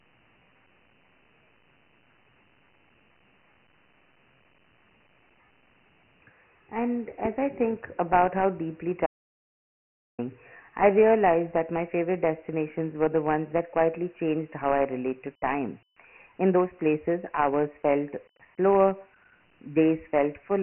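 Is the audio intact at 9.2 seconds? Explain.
No. An audio dropout to silence runs from 9.06 to 10.19 s, losing about 1.12 s. The sound cuts to silence with no room tone, most likely because the input was lost while the recorder kept writing silence. The speech around this gap also carries Dialogic VOX ADPCM damage: 24 kbps 4-bit coding leaves heavy gritty hiss and nothing above 3 kHz, which fits a 6,000 samples-per-second rate.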